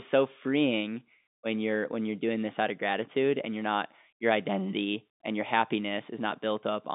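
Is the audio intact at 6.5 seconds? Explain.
Yes, the audio is intact at 6.5 seconds, with nothing there beyond the narrow telephone band of the G.711 coding that runs through the speech.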